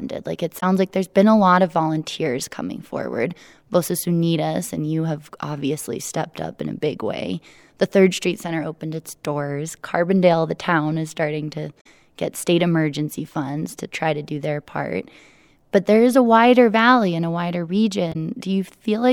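At 0.58 to 0.63 s, just before "like there's been a", the speech briefly breaks up. This is damaged data in a compressed stream. Some bytes in the encoded frames are corrupt, so the decoder misreads them and loses sync. The same brief fault returns at 11.80 to 11.86 s, between "town is starting to" and "get state emergency funds". It comes again at 18.12 to 18.16 s, after "valley and a wider".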